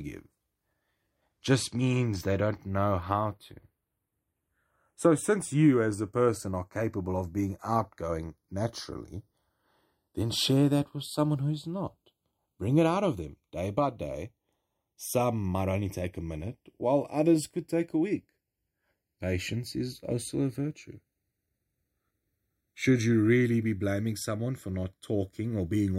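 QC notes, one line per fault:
Throughout, channels drifting apart: the two channels of this speech sound as if they were captured on devices running from separate clocks, with a mismatch of around 20 parts per million. That lets the delay between left and right creep steadily, reaching roughly half a millisecond by the end. Summed to mono, the offset produces comb-filter notches that glide slowly across the spectrum, heard as a gradual, slowly shifting flanging on the sound.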